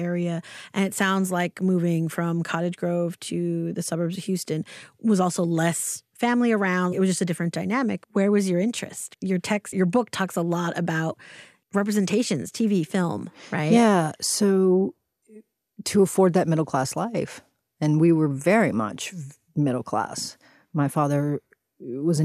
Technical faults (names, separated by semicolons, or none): none